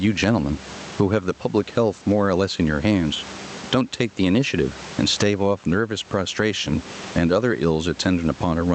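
Gain pumping runs through the whole speech clip. Between phrases the room noise sits about 32 dB below the speech, with the level swinging by around 20 dB. The likely cause is input gain set far too high, with a fast limiter clamping every peak. Unlike a noise gate, the background never cuts to silence. Loudness differences are flattened, and the high end stops near 8 kHz, as expected from the call codec.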